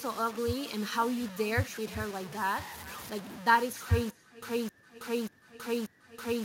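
Low bit depth without dither runs through the whole speech clip: quiet syllables and decays turn gritty and sputter, with a grainy distortion that tracks the signal and sits only about 15 dB below it. The likely cause is rounding to very few levels, consistent with truncation to about 6 bits.

Echo with no canceller is also present throughout. Every phrase returns roughly 0.4 s later as a thinner copy about 20 dB down, because a far-end loudspeaker feeds back into a microphone and nothing removes the returned signal.

Stutter with silent gaps begins at 4.10 s and lasts to the end. A 266 ms fragment repeats at a steady 587 ms interval, each repeat followed by 320 ms of digital silence, four times in all. The likely cause is a stalled stream replaying its last buffer, so the intended audio is lost.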